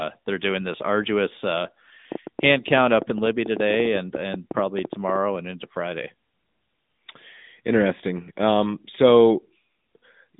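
Throughout, the speech passed through the AMR narrowband mobile codec, which fits its 10.2 kbps mode. The band runs from 150 Hz to 3.7 kHz with nothing above 3.8 kHz, leaving the speech muffled and plainly buzzy.

From 2.12 s, just after "doing this arduous uh", to 5.17 s, ending before "and into", a train of clicks appears, likely from electrical interference or a faulty connection. Some thirty similar pops arrive at an irregular pace averaging about 9.6 per second, peaking a few dB above the speech.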